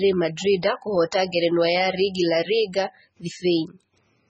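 From start to end the speech has a hard treble ceiling at 8.8 kHz and a heavy watery, swirling texture, with sibilants chirping and consonant onsets smeared. This is likely MP3 compression at a very low bitrate, consistent with about 16 kbps, starving and zeroing weak spectral lines.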